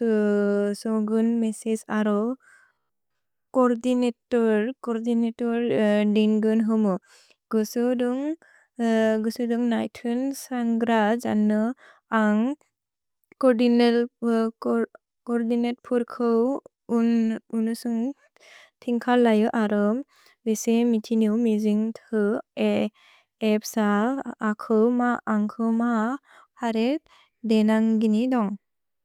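From 2.70 to 3.19 s, just after "मेसेस् अरो", the speech turns into a rigid metallic buzz near 66.8 Hz: robotic sound from repeated short buffers. The likely cause is audio arriving too slowly, so a roughly 15 ms slice is looped, replacing most of the real signal there.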